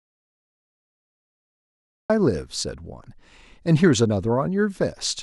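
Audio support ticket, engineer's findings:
Audio dropout to silence, 0.00–2.10 s, already under way when the clip begins. Silence, no room tone, then speech cuts in abruptly at 2.10 s. Likely cause: input lost upstream (disconnected mic, failed link or mute) while the recorder kept writing silence. Content in the gap unrecoverable.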